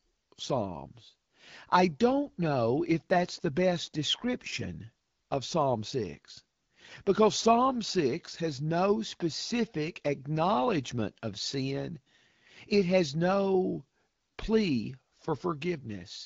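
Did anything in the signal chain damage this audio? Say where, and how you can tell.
No, nothing in the signal chain damaged this audio.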